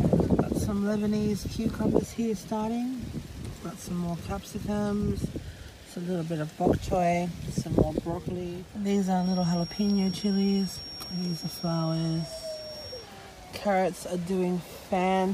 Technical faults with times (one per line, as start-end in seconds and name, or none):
9.15-13.11 feedback whistle